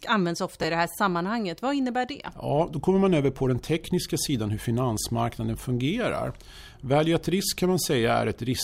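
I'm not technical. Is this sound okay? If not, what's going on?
No. At 0.62 to 0.64 s, just before "i det här sammanhanget", there are chunks out of order: a piece of speech about 11 ms long arrived one chunk late and plays after the piece that should follow it, leaving a brief jumbled moment.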